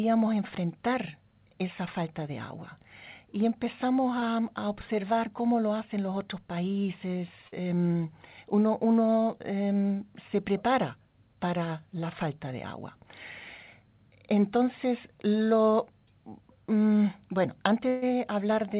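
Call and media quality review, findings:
Short concealed packet loss, 4.20–4.24 s, just before "observar cómo lo hacen": quick smear where about 20 ms never arrived in time. The jitter buffer/decoder papered over it by extending the last sound, then crossfaded back.

Burst of packet loss, 7.48–7.54 s: roughly 40 ms gone in a run. Concealment holds the previous sound and tapers it, then playback picks up slightly further on. Reads as a brief held buzz/hiss.

Burst of packet loss, 17.88–18.04 s: the bigger one. About 140 ms lost, with concealment stretching and fading the last sound the whole way, no hard silence. Audio resumes with that chunk simply skipped. Probable cause: consecutive packets late or dropped upstream of the jitter buffer.

Band tops out around 4 kHz, which fits G.711 mu-law at 64 kbps on the call leg.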